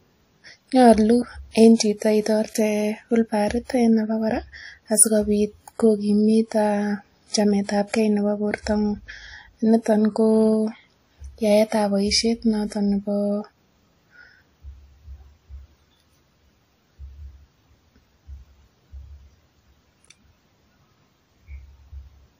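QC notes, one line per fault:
throughout, transcoding between lossy codecs: nothing above 16.3 kHz, with two different kinds of codec artefact on the speech at once. That likely comes from two passes, something like WMA and then AAC-LC at low bitrates, the later one spending bits on the earlier one's artefacts and adding its own.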